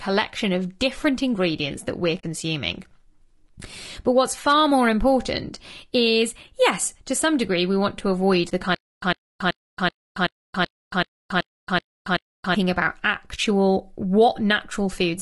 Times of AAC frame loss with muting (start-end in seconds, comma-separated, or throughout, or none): 2.19-2.24, 8.49-8.52